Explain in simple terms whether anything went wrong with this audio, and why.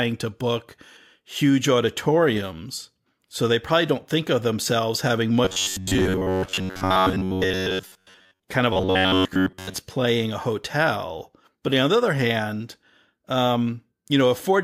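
Robotic sound from repeated short buffers, 5.45 to 8.43 s (after "think of themselves having") and 8.73 to 9.78 s (before "playing a hotel"): the speech turns into a rigid, metallic buzz at about 94 times a second. Most of the sound is likely replaced by repeated snippets of about 11 ms, while the real audio is skipped.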